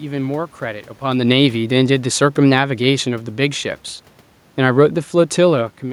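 From 1.02 to 3.61 s, automatic gain falling: the gain control judged the input too loud or its background noise too strong and eased its gain down by about 4 dB. The speech and room noise sink together.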